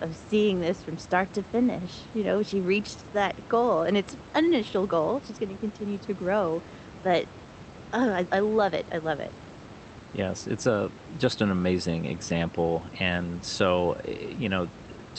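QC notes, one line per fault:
Nothing to flag in this speech clip; the room noise sits about 16 dB under the speech, and the call path carries the audio as expected, with the top end stopping around 8 kHz.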